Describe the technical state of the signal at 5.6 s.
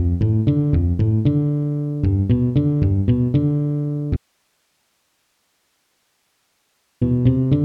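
Audio dropout to a faint residue, 4.17 to 7.01 s: the signal likely vanished while the path stayed live, leaving only hiss around 50 dB below the sound.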